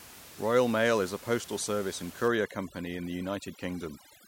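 From 2.28 s to the end, overdone noise removal kicks in: the room noise, about 19 dB under the speech, gets pushed down and breaks up into twinkly specks.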